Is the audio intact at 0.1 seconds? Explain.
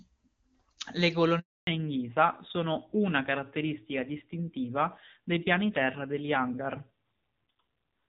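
Yes, at 0.1 seconds the speech is intact, with no fault to be heard at that moment.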